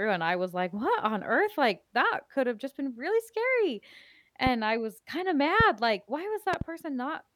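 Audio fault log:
4.47 to 6.64 s, loud pop: sharp pops at 4.47 to 4.49 s, 5.60 to 5.63 s and 6.53 to 6.64 s (a double), peaking about 10 to 15 dB above the speech, likely electrical voltage spikes.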